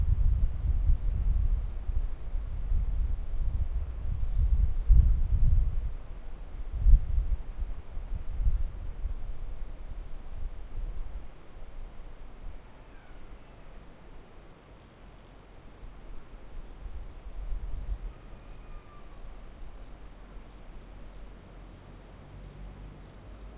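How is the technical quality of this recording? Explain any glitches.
The technical quality of the recording holds up throughout, with no glitches to explain.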